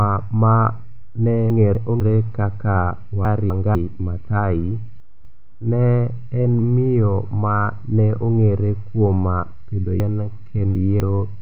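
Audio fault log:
1.5–2.0 s, 3.25–3.75 s, 5.0–5.5 s: chunks out of order. In each span, one 250 ms chunk plays one chunk late, so two neighbouring pieces of speech swap and the phrase briefly jumbles. The waveform shows abrupt steps at 0.25 s spacing, and the spectrogram shows vertical breaks where the formant tracks jump.
10.0–11.0 s: chunks out of order. One 250 ms chunk plays three chunks late. This gives a longer garbled stretch, with three hard joins and visibly discontinuous harmonics.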